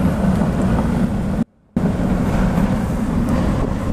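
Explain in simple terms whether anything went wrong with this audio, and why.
The signal path likely lost its input for about a third of a second while staying switched on. That is an audio dropout to a faint residue: from 1.43 to 1.77 s the sound abruptly drops to a barely audible faint sound, then snaps back.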